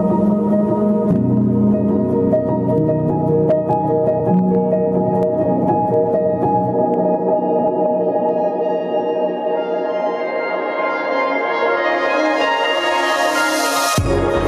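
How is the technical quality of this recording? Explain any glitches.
Quality's held back by two problems: constant level pumping and a few bursts of clipping.

Gain pumping runs the whole way through. Loud and soft parts end up closer in level, a swing of something like 15 dB, so everything sounds squashed. Likely cause: input gain set way too hot, with a fast limiter or compressor clamping down each time.

Hard clipping shows up from 1.13 to 1.42 s, as a brief tick at 3.50 s, from 4.34 to 4.56 s, and from 13.98 s to the end. Peaks push past what a stage can pass, by about 3 dB, 3, 1 and 6 dB, and get chopped flat. That adds crackly high harmonics, harshest in the final stretch.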